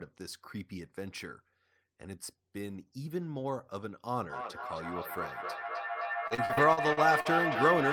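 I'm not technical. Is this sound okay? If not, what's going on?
No. From 4.3 s to the end there is feedback echo between two devices: two devices in the same room are on the call, and one microphone picks up the other's loudspeaker. The speech returns roughly every third of a second, with repeats almost as loud as the original.

From 6.27 to 7.28 s there is repeated packet loss, which gives a robotic sound. Seven brief dropouts hit that second, each patched by stretching the sound just before it. About a quarter of the stretch is filler, so it sounds choppy and mechanical.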